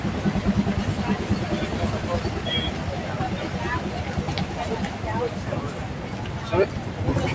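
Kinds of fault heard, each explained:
Noise suppressor applied to sounds: a speech noise suppressor stays on throughout. It treats steady sound as noise, so the level pumps by about 5 dB.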